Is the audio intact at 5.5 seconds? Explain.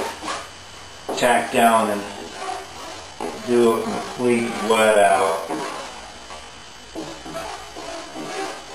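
No. From 1.99 s to the end, software likely stretched the audio to fill a longer span, repeating short pieces to hold its pitch. At 5.5 s this time-stretched section runs at 0.61 times normal speed. The pace drops abruptly at 1.99 s and drags, while the pitch stays unchanged.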